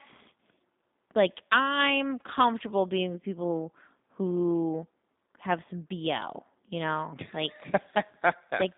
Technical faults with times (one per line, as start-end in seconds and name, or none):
0.00-8.77 G.729 codec